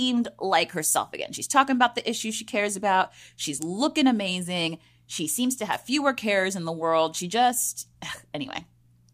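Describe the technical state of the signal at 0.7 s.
At 0.7 s the speech signal is intact, with no fault audible at that moment.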